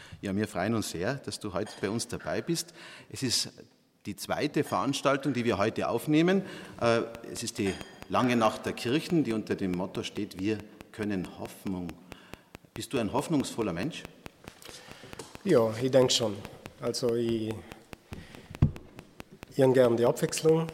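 From 7.15 s to 20.7 s a train of clicks runs over the sound at a regular 4.65 per second, about seventy near-identical pulses peaking some 10 dB above the programme, audible as steady ticking even in pauses; likely interference from nearby equipment or a faulty connection or power supply.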